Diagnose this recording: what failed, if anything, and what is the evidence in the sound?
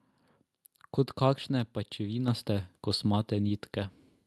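The call processing's automatic gain control raised the microphone's input volume in one step. At 2.28 s the speech and the background noise jump together by about 6 dB, the mark of a microphone volume step-up rather than a change at the source. The Opus call path limits the audio to about 12 kHz.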